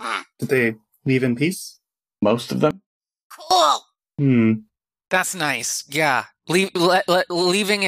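From 2.71 s to 3.51 s the speech collapses by about 23 dB, leaving a faint residue instead of silence. The likely cause is one channel inverted: with one stereo side in reversed polarity, the centred voice cancels when the channels are summed to mono, and only their small difference survives. Unlike a dropout or a simple gain dip, a ghostly trace of the speech remains.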